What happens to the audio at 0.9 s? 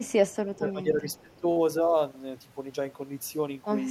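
At 0.9 s you're inside a stretch of speech suppressed in double talk, running from 0.47 to 1.05 s. The speech dips by as much as roughly 20 dB for a bit under half a second, most likely an echo canceller ducking this talker while the far end spoke over them.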